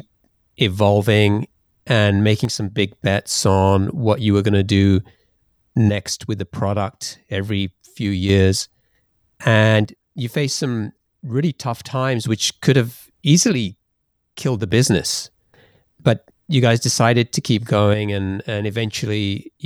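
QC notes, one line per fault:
2.45–2.79 s (between "evolving and" and "bets on what you"), 5.89–8.29 s, 9.85–12.25 s (up to "which could have"), 13.52–14.71 s (just after "which could have"), 17.94 s to the end: one channel drops out. Level falls abruptly by about 6 dB, then recovers, except for the last, which lasts to the end. The likely cause is one stereo side going silent, which halves the shared sound in the mono sum.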